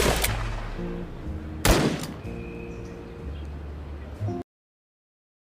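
At 4.42 s the sound stops dead in the middle of what it is doing, with no fade or natural decay, and the remaining 1.1 s is flat digital silence. This is a cut-off end: the final stretch of audio was never written out or played back, so the last buffers that should have carried the sound to its close are simply missing, and playback falls straight to zero.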